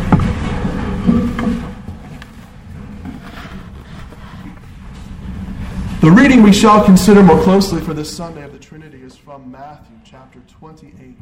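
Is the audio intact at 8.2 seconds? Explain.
No. A steady ticking, zipping texture rides on the sound from 7.34 to 8.82 s: zipper noise, with the level dropping about 25 dB in unsmoothed 2 dB steps, about ten per second.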